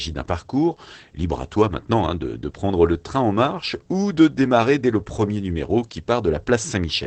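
Throughout, Opus voice compression, running SILK at what sounds like about 12 kbps, drops everything above 8.6 kHz, leaving the speech muffled, hoarse and faintly robotic.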